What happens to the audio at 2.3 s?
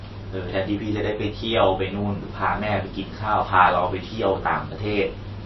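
At 2.3 s, as across the whole clip, the speech carries MP3 compression damage, likely from a bitrate low enough to fit about 24 kbps. Starved of bits, the encoder cuts everything above 5.8 kHz and drops weak frequency lines, leaving dull, watery, swirling speech.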